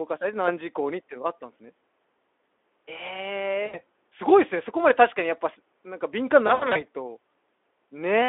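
Speech over a narrow phone-style line, roughly 300 Hz to 3.5 kHz, with light Speex coding. It has two stretches of VoIP packet loss concealed by the speech codec. From 3.65 to 3.80 s, about 80 ms of audio goes missing, which fits four 20 ms frames. The decoder keeps repeating its last pitch and filter at falling gain, so you get a brief buzzy or noisy smear that takes a moment to recover. From 6.47 to 6.84 s, the gaps are scattered over about 280 ms, around 140 ms lost in total, with the longest run about 80 ms, so the smeared, weakened patches keep coming back.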